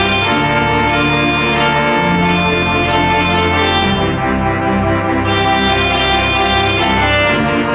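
No technical fault can be heard anywhere in this clip. There are no moments where the sound breaks, jumps or changes in a way that points to a problem.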